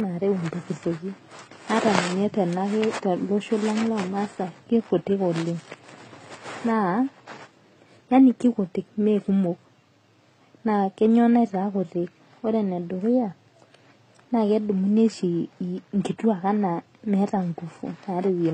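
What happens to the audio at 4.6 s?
At 4.6 s, as throughout, nothing sounds above 9.7 kHz. Stacked artefacts point to transcoding between lossy codecs, likely low-bitrate AAC re-encoded as HE-AAC.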